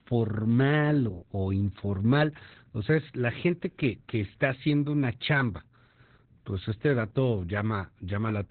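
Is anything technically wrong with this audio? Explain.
Yes. Heavy Opus voice compression runs through the whole clip of speech. Nothing survives above about 4.3 kHz, which points to the narrowband SILK mode at a very low rate, around 8 kbps. The coder models the voice with linear prediction and codes the excitation coarsely, so the speech sounds muffled, hoarse and faintly robotic. A simple low-pass filter would only dull the sound; this grainy, synthetic texture marks it as codec damage.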